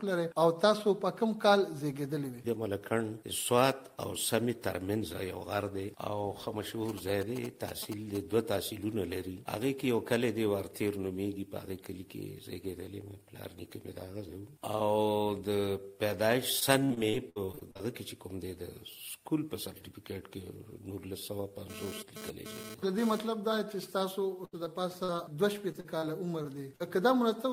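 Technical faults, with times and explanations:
6.89–8.17 s, GSM signalling bursts: a galloping dit-dit-dit of short raspy buzzes, roughly 10 dB under the sound. A nearby 2G phone is sending brief groups of radio bursts at 217 Hz, and the audio circuit rectifies them into audible clicks and buzz.
16.59–17.81 s, repeated packet loss (robotic sound): eleven dropouts in quick succession, the longest 63 ms, with about a quarter of the stretch patched over. Each hole gets filled by stretching the last bit of sound, so it comes out choppy.
21.70–23.19 s, GSM phone buzz: a hard, harmonic-rich 217 Hz rasp about 12 dB below the sound, coming and going rather than steady. That on-off pattern fits a 2G phone doing a data transfer, its bursts rectified by the audio electronics.
24.45–26.82 s, repeated packet loss (robotic sound): nine gaps spread over a longer span, the longest 77 ms, with about 13% concealed. 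It's sparser than the earlier patch, but each fill still repeats the previous sound, giving that broken, choppy stutter.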